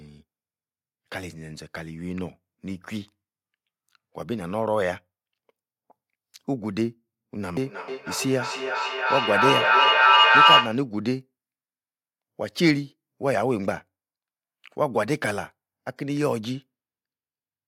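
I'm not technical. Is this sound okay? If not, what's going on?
No. From 7.63 to 10.89 s there's feedback echo between two devices: the speech loops back about every third of a second, building louder than the original.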